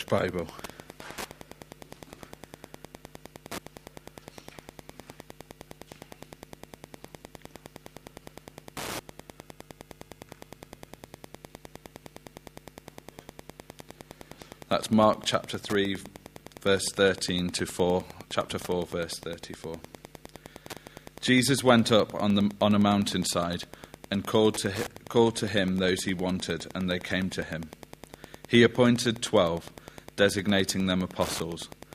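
Wi-Fi interference runs throughout: the audio circuit rectifies a nearby radio's beacons, producing steady ticking every 102.4 ms, roughly 20 dB below the sound.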